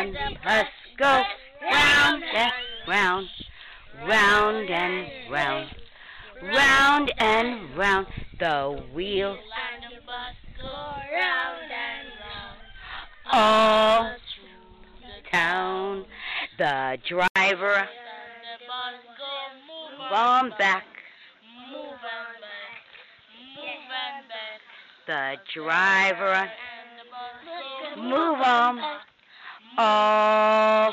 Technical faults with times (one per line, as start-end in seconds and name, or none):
17.28-30.93 input switched to a poorer device